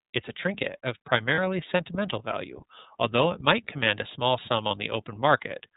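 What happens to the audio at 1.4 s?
A lost iLBC frame runs from 1.34 to 1.39 s, right after "a trinket of" and just before "sentimental value although it". About 30 ms of audio went missing, which fits a single dropped frame in iLBC's 30 ms mode. The decoder covers the hole by repeating the last pitch cycle blended with noise, so the gap sounds like a brief held, slightly buzzy vowel. Because each iLBC frame decodes independently, normal sound returns straight afterwards.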